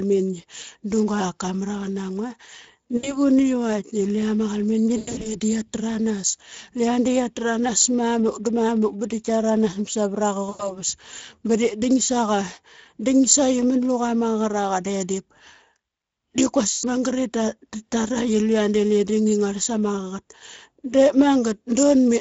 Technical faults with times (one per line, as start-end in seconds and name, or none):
0.00-22.21 Speex codec
2.97-3.19 VoIP packet loss concealed by the speech codec
4.97-5.35 VoIP packet loss concealed by the speech codec
10.49-10.82 VoIP packet loss concealed by the speech codec
16.71-16.85 VoIP packet loss concealed by the speech codec